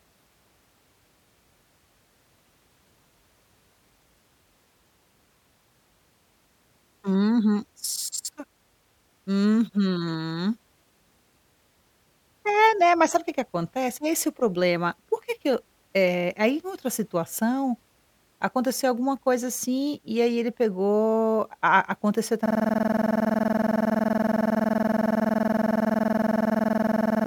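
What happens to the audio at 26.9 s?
At 26.9 s the system hang loop is in progress; it began at 22.46 s and runs to the end. The host stalled while the hardware kept replaying one 46.44 ms chunk, which fits a 2048-sample buffer, giving a rapid 21.5 Hz rattling stutter repeated 104 times.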